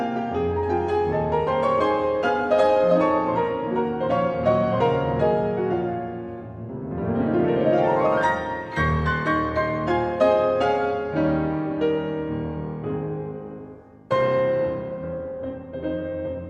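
No technical faults can be heard in this audio.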